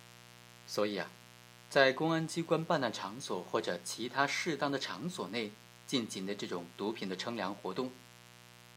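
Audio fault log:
Throughout, mains buzz: a steady, raspy buzz sits under the speech for the whole clip, roughly 20 dB below it, built on a 60 Hz fundamental. The rasp comes from sharp switching spikes, of the kind a dimmer, rectifier or poorly shielded line injects, arriving twice per mains cycle at a 120 Hz rate. Because those spikes are so narrow, their harmonic series extends from 60 Hz well up into the kilohertz range, where it adds an edge rather than a pure hum.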